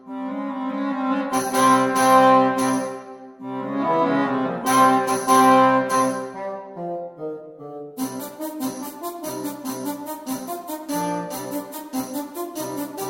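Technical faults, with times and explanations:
0.23–13.08 s, clock slip clicks: faint regular ticks roughly every 0.4 s, about thirty in all. Likely unsynchronised clocks about 50 ppm apart, each slip dropping or repeating one sample.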